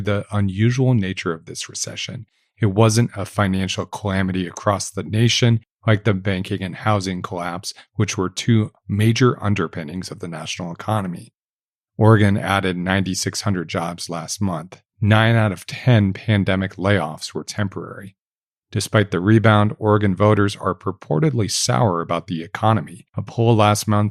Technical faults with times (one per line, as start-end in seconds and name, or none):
none